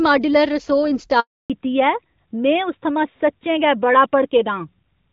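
A phone call recording of speech, carried at first as clear HD Voice over the AMR wideband codec with only light coding damage. At 1.20 s a handover gap begins. The call is switching networks, and no speech frames arrive during the move. The sound fades out quickly and stays silent for 300 ms, until 1.50 s. Anything said then is gone. From 1.50 s to the end comes a fallback to narrowband. The call drops from AMR-WB to the older AMR-NB codec. Nothing above 4 kHz remains. The speech turns duller and rougher for the rest of the clip.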